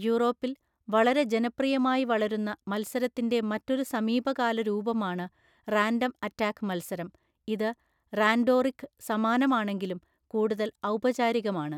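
No technical faults can be heard anywhere in this speech recording.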